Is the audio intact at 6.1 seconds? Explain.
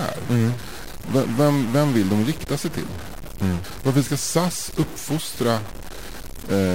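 No. At 6.1 s, as throughout the speech, a stuck bit is the likely cause of harsh, buzzy distortion. One data bit holds a fixed value, shifting about half the samples by a step around -30 dBFS. Unlike clipping, it also fills pauses with steady noise.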